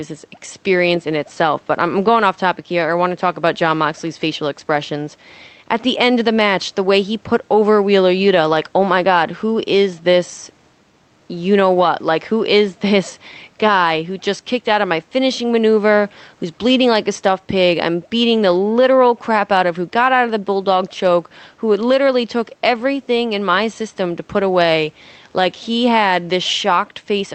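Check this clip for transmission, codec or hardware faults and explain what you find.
One fault runs through the whole clip: gain pumping. The level moves by roughly 5 dB as the limiter reacts to the speech. The likely cause is input gain set far too high, so a fast limiter keeps pulling the level down. Unlike a noise gate, which cuts the gaps to silence, this does not silence the gaps, and the speech sounds squashed. The faint room noise and the 8 kHz upper limit from the call codec can be heard underneath.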